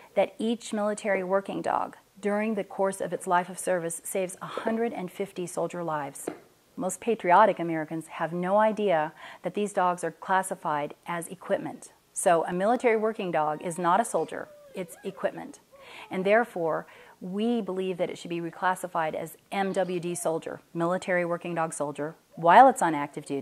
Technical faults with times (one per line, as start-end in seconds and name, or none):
12.29-12.76 CD scratch ticks